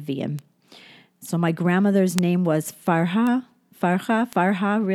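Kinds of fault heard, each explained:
Bit error spike: a flipped bit knocks one to three samples off value, giving four sharp ticks, seen as waveform spikes and full-height spectrogram lines.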